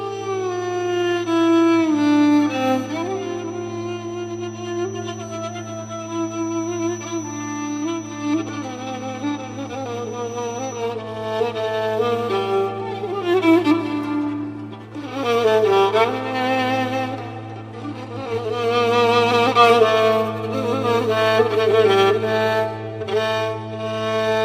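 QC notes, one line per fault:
0.00–10.89 s, feedback whistle. A thin, steady tone near 5.9 kHz sits well below the main sound, about 25 dB down, swelling and fading slowly in level, then stops. It is likely a speaker-to-microphone loop held just at the edge of feedback.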